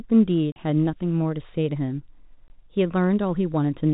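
At 0.52 s the speech drops out for 40 ms, to 0.56 s, and again at 2.48 s for 20 ms. That's packet loss filled with silence: the receiver never got those chunks and just played silence in their place. The gap lengths suggest 20 ms packets, two lost first and one later. The cuts are abrupt, with hard edges at each hole. They sit over the G.711 phone band.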